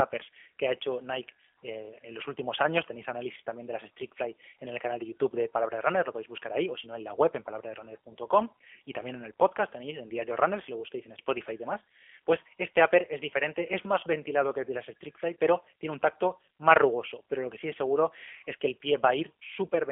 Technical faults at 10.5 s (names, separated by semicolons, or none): G.729 codec